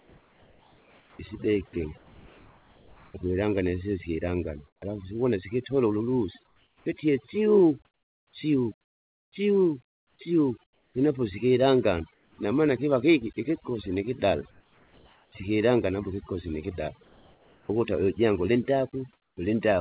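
Speech runs through a call path with nothing above 4 kHz, which fits a narrowband telephone codec. Overdone noise removal is heard throughout. The background sinks toward silence and breaks up into twinkling specks. Quiet parts of the voice are pulled down along with the noise. The reduction appears set far too strong, so whole frequency bands close off whenever they sit near the noise estimate.

From 0.0 to 3.14 s, the sound is chopped by the voice detector. It cuts in and out more than once before "ukwilanga nisisi". About 2.4 s in total is swapped for fill. The likely cause is a sender-side detector switching transmission on and off.

Comfort noise replaces the background at 4.67 to 4.82 s, within 6.47 to 12.38 s (about 2.25 s altogether), at 14.51 to 15.32 s between "kiva kiki ikikosi nikidale" and "sikilangana apo ikikosi nikida", at 17.03 to 17.69 s, and at 19.13 to 19.37 s. Each time, the real background gives way to a smooth, featureless hiss. 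It drops by about 10, 3, 4 and 7 dB in the measured gaps. This likely comes from discontinuous transmission, with the receiver synthesising noise while the sender is silent.

The onset is clipped by the voice detector at 4.8 s, before "alafu siwona sikitole ululusi", and again at 17.67 s. About 20 ms of each start is missing, so the sound begins abruptly without its soft attack. The detector was likely slow to register that sound had resumed, and comfort noise covered the gap.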